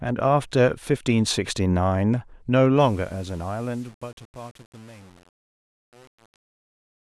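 From 2.80 s to the end at 7.00 s, the fade-out is requantised without dither, consistent with 7-bit truncation, so truncation distortion on the fade makes the tail gritty.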